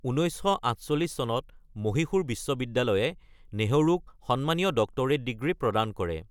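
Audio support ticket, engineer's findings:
No technical faults found.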